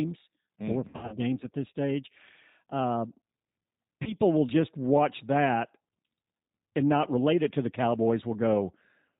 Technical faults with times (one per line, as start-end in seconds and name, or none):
0.00-9.19 G.729 codec
0.88-1.19 VoIP packet loss concealed by the speech codec
4.03-4.16 VoIP packet loss concealed by the speech codec